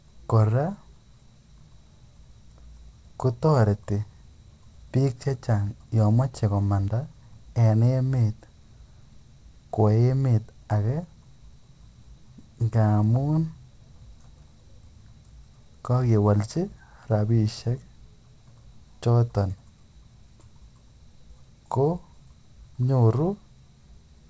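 A single sharp, broadband tick at 6.88 s, unrelated to the speech, is a bit error spike: one flipped bit made a lone sample jump by a power of two before returning, on top of the call path's 8 kHz band limit.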